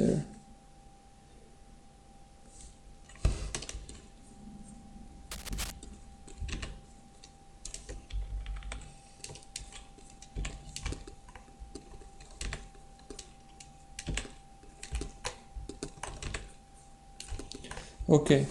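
At 5.31 s a burst of cable scratch noise begins and runs until 5.72 s, roughly four tenths of a second. It is a dense, irregular crackle and rustle laid over the sound, loud enough to sit only slightly below the programme level. The likely cause is a worn cable, connector or control being moved, so that its contact resistance fluctuated rapidly and modulated the signal path with uneven noise bursts.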